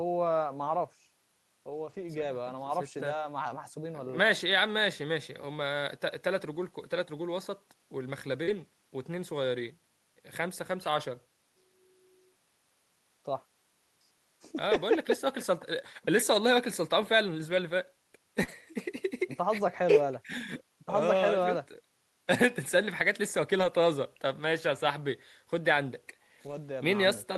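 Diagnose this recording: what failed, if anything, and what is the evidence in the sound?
The network path is dropping packets, and the in-band error correction is covering most of them. That's lost packets rebuilt from error correction, at 1.69–2.23 s, 8.47–8.61 s, 14.73–14.75 s, 17.51–17.57 s, 18.47–18.53 s, 23.59–23.65 s and 26.47–26.57 s. The speech never gaps, but those stretches turn rougher and noisier because the decoder is playing the low-bitrate copy carried in the following packet. The long one near 2 s lasts about 280 ms, which fits a burst of around fourteen 20 ms packets.

There are also two spots where no backup copy arrived in time, so you get short concealed packet loss at 8.43–8.49 s and 18.43–18.49 s. Each is a 40 ms hole that the decoder papered over by extending the last bit of sound, either from its pitch or as shaped noise, before blending back into real audio. You hear it as a brief smear or wobble. 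Both butt right up against error-corrected stretches, so these look like the edges of the same network bursts.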